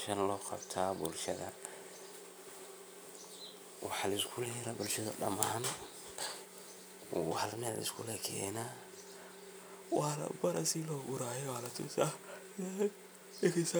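Listening to the speech, nothing stood out as a technical fault at any point.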